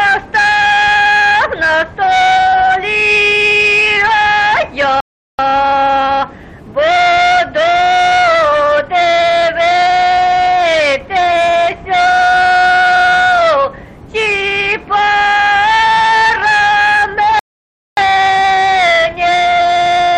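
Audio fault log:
5.00–5.39 s and 17.39–17.97 s, rebuffering stall: the sound drops abruptly into silence and then picks up again at exactly the point where it broke off, with nothing skipped or repeated. The first gap adds 384 ms and the second adds 578 ms, about a second of extra time overall. The player used up its downloaded audio and paused until more data arrived, so the content arrives intact but later than it should.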